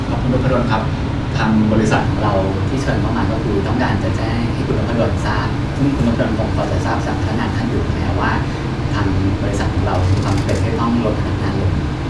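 From 1.99 s to the end, the speech runs slightly high and hurried, about 1.09 times faster and roughly 1.5 semitones sharp. This is a wrong sample rate fault: the samples are played back faster than they were captured, with no conversion, which fits audio recorded at 22 kHz being played at 24 kHz.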